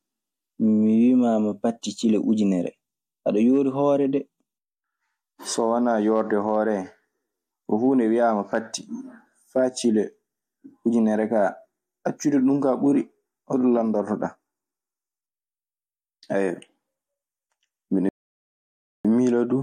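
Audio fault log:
18.09–19.05 s, rebuffering stall: the speech just drops to silence for a little under a second, then picks up right where it left off. The player ran dry on downloaded audio and waited for more, so nothing's missing, but roughly 0.96 s gets tacked on.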